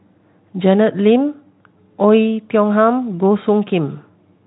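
No faults heard in this speech recording, which goes through a Speex path working as intended.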